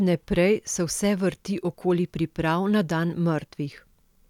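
No technical faults can be heard anywhere in the speech recording, and the signal holds steady throughout.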